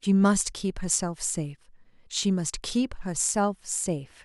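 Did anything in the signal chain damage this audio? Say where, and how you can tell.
Yes. At 3.67 s the speech carries a single sharp click, a thin vertical line across the spectrum. These are dropped samples: a couple of samples, a tiny fraction of a millisecond, go missing and the waveform jumps straight to a later value. The likely cause is a driver or buffer hiccup.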